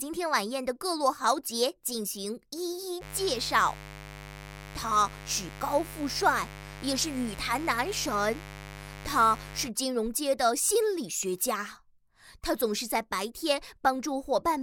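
From 2.99 s to 9.71 s a steady, raspy mains buzz appears. Switching spikes on the 50 Hz supply leak in, well below the sound in level.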